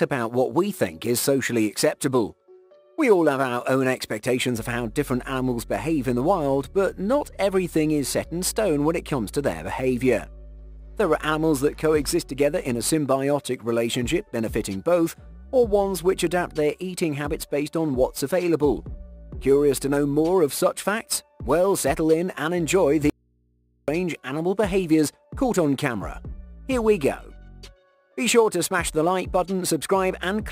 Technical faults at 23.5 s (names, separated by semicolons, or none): audio dropout to a faint residue